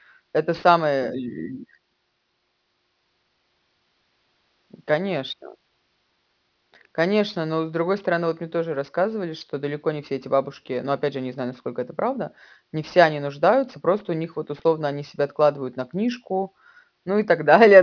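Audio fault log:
throughout, aliasing: the speech was downsampled with no anti-alias filter, which points to a drop from 44.1 kHz to 11 kHz, so content above the 5.5 kHz fold came back as false, unrelated tones roughly 30 dB down, leaving sibilants gritty and metallic.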